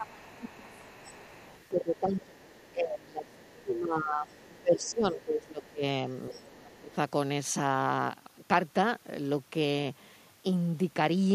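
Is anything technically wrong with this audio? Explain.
Yes. The speech shows two echo-cancellation faults that overlap in time.

Speech suppressed in double talk occurs from 0.0 to 1.11 s, 1.69 to 5.83 s and 6.3 to 6.97 s. The talker's level sags by roughly 15, 20 and 25 dB at the deepest points, so the speech dips and thins in pieces. The likely cause is the echo canceller mistaking simultaneous far-end talk for echo and attenuating the whole microphone signal, local speech included.

The other side's voice leaks through from 0.07 to 2.71 s, 3.28 to 3.62 s, 4.33 to 4.88 s, 5.63 to 5.67 s and 6.32 to 6.47 s. It is a faint second voice, around 30 dB below the talker and nearer 25 dB below in the last stretch. It comes through as scraps and one longer run. This is likely residual loudspeaker echo that the canceller failed to subtract from the microphone signal.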